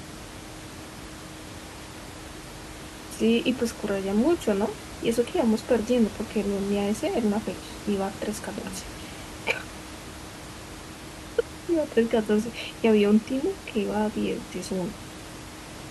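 Nothing goes wrong anywhere in this speech recording; the only thing underneath the talking is a bit of room noise, sitting about 15 dB below the speech, which belongs to the room the microphone was in.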